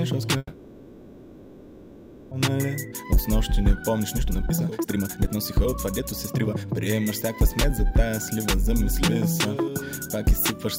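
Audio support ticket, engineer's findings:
Call audio freeze, 0.37 to 2.33 s: last sound stretched into a fading buzz for about 1.9 s, then resumes where it stopped. Likely jitter buffer underrun from delayed packets.

Jitter buffer speed-up, 2.49 to 10.55 s: playback at 124% speed, same pitch, sounds hurried. Receiver trims pitch-period chunks, roughly 2 s total, draining excess buffered delay.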